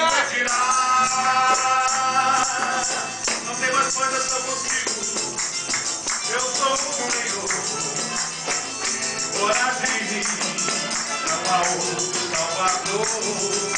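No technical faults can be heard anywhere in the audio. Nothing interrupts or disturbs the sound at any point.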